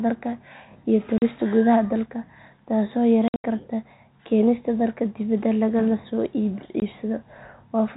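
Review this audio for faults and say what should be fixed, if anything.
The speech has packet loss filled with silence. Sound drops out to hard silence from 1.18 to 1.22 s, 40 ms. From 3.28 to 3.44 s, about 140 ms goes missing in scattered holes, the longest 80 ms. A last gap runs from 6.80 to 6.82 s. Every gap is a multiple of 20 ms, which fits 20 ms packets. The gaps have hard edges. The telephone-band G.711 sound carries through unchanged. Enabling jitter buffering with packet loss concealment would prevent these holes.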